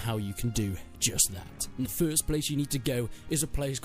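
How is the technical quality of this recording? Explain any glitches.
The recording has one glitch, a brief burst of damaged data in a compressed stream from 1.82 to 1.86 s, lasting about 44 ms. Part of the encoded data there was corrupted, so the decoder misread those frames, lost sync and had to find the next valid frame header before decoding cleanly again. It comes through as a short chirp, squawk, click or hole. A plain dropout would go silent or fade, and a simple click would be a single instant tick, but this glitch lasts a few tens of milliseconds.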